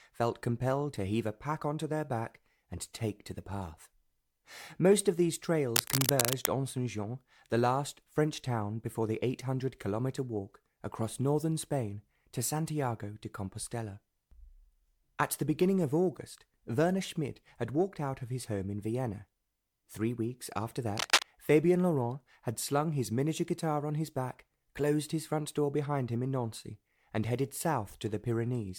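A dense, uneven scratching rustle cuts across the sound from 5.75 to 6.46 s, roughly as loud as the audio itself, and again, a little louder, from 20.97 to 21.23 s. This cable scratch noise is likely a worn cable or connector being moved.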